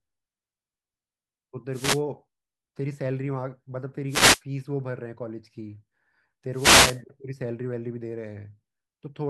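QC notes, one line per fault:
1.72–2.02 s, 4.08–4.41 s, 6.52–7.01 s: wireless microphone noise hit. The FM radio link fades as reflected signals cancel, so receiver noise rises over the speech as brief static swishes lasting about 0.3 to 0.5 s.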